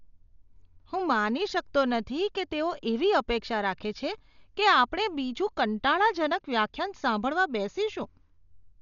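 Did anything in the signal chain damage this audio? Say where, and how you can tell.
Yes, at the codec stage. The speech sounds dull throughout, with nothing above 6.9 kHz and rough, fluttering noise. This is likely Dolby Digital compression at around 48 kbps. Starved bands get filled with dither noise.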